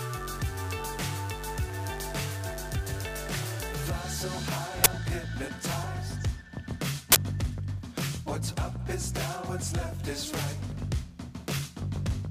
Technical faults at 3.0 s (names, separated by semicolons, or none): none